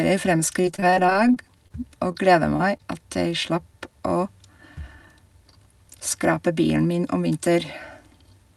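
From 0.61 to 1.72 s the speech turns choppy, with bits audibly missing. This is repeated packet loss: about a dozen short holes, the longest 23 ms, were each patched by extending the preceding sound, so roughly 18% of that stretch is filled-in rather than real audio.

Three brief smears follow, at 2.12–2.16 s, 2.56–2.61 s and 2.77–2.81 s, each a small wobble in the flow. Each is short concealed packet loss: about 20 ms of audio failed to arrive in time, and the receiver bridged the gap by continuing the last sound before blending back into the real audio.

Between 7.17 and 7.39 s the speech briefly sounds rushed while its pitch stays unchanged, running at about 113% speed. That is a jitter buffer speed-up: holding more audio than it needed, the receiver trimmed out small pitch-period slices, roughly 40 ms in total, to reduce delay.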